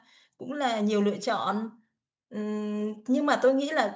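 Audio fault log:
2.29–3.95 s, automatic gain rising: speech and the background beneath it swell together by about 4 dB across this span, because the automatic gain control judged the input too quiet and raised its gain gradually rather than in a single step.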